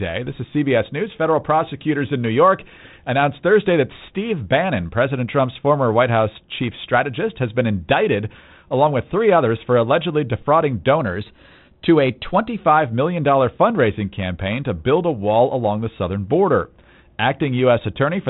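Speech over a narrow telephone band consistent with G.726 ADPCM coding. From 10.99 to 12.59 s, after "others for allegedly defrauding", speed jumps about 5.6% and pitch rises 94 cents, close to a semitone. It returns before "million fundraising campaign to". The likely cause is a drift correction step, where clock-matching software abruptly changed the playback rate to rebalance its buffer.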